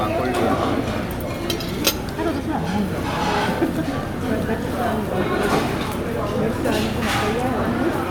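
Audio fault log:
Nothing to log here: the sounds in this clip come across with no faults anywhere to note.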